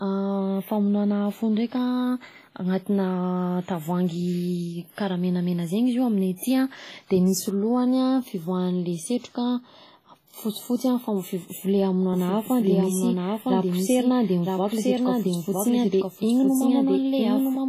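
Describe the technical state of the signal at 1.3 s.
At 1.3 s the speech carries heavy codec damage that runs through the whole clip: a ringing, washy smear with hiss breathing alongside the signal, and nothing above 14.9 kHz. The likely cause is WMA compression at a bitrate that sounds close to 24 kbps, where long transform blocks spread quantisation noise over tens of milliseconds and weak spectral lines are zeroed. Unlike a plain low-pass filter, the damage is more than missing treble; the smearing and breathing hiss move with the speech itself.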